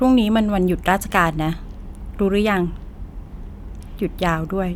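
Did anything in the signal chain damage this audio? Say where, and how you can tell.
No, nothing along the chain seems to have left a mark on this recording; I can't hear any damage anywhere in it.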